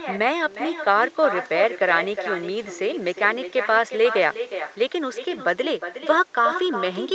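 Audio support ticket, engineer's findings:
Echo with no canceller, throughout: every phrase shadowed by a thinner copy roughly 0.4 s later, about 10 dB down. Far end's loudspeaker feeding its mic, uncancelled. Waveform shows trailing ghost envelopes; spectrogram shows delayed faint duplicates beneath the 8 kHz ceiling.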